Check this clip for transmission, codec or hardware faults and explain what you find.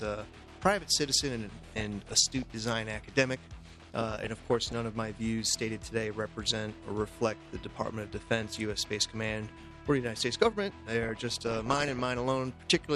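The clip has one kind of fault, DAB burbling, in three bursts, at 1.62 to 2.50 s, 3.78 to 4.78 s and 11.03 to 12.01 s. Weak reception let bit errors, somewhere around half a percent to one percent and worst in the last burst, slip past error correction into the MP2 stream. Corrupted samples put short blips of noise in individual sub-bands, and corrupted scale factors make sub-bands leap in level for up to a frame, across what sounds like dozens of frames per burst. The result is a burbling of noise blips and level jumps laid over the sound.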